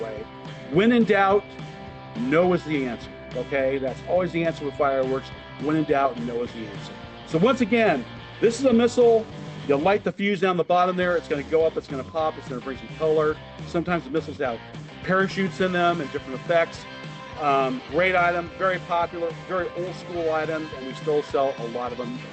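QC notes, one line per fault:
No faults found; the WebRTC call path is working as expected, with the Opus codec band-limiting the audio at 8 kHz.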